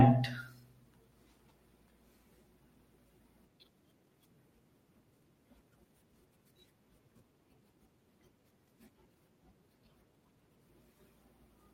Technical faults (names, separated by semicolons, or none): none